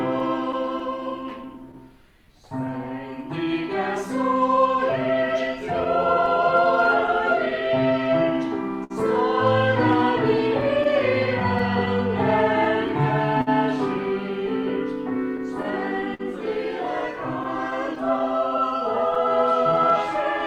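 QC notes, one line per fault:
Throughout: clock drift between sender and receiver. Small timing hiccups recur at uneven intervals across the whole clip, with a faint sense of the tempo never quite settling. The sender's clock runs roughly 4 percent slower than the receiver's, so the jitter buffer keeps draining. The receiver has to stretch or repeat short pieces to stay fed, and each of those edits leaves a small seam in the sound.
1.24–20.10 s: repeated timing corrections. From just after the start almost to the end, the sound picks up slight hiccups and a subtly uneven pace, all leaning the same way. The receiver keeps inserting short repeated pieces to cover for the slow sender, playing the material at about 98 percent speed. Together the insertions add around 400 ms. They are spaced unevenly, so the pace wobbles rather than simply slowing.
0.19–1.75 s, 5.84–7.53 s, 10.38–13.49 s, 17.43–19.18 s: scattered short gaps. 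Each stretch carries brief ticks and small smears where the sound seems to catch for an instant. There are a handful to about ten per stretch, the longest mostly 10 to 15 ms. The 10.38–13.49 s stretch is the worst, with roughly 150 ms patched and one hole near 50 ms. Late or lost packets left the holes, and the receiver filled each by continuing the last sound, so nothing is actually missing.
8.84–8.92 s: short stall from a late packet. One sound is held a touch too long, with a slight buzz or dip before things carry on from the same point. A packet was not there when due, so the jitter buffer ran dry. The receiver extended the last sound for about 60 ms until the packet arrived, adding 60 ms of delay from here on.
15.15–16.21 s: repeated stalls (stutter). Over about a second, the audio drags and stutters, catching five times in quick succession. The longest catch, 52 ms, is held and slightly faded. 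Packets kept arriving later than they were being played, so the jitter buffer emptied again and again. Each time the receiver continued the last sound until data came in, filling 88 ms, about 8 percent of the stretch.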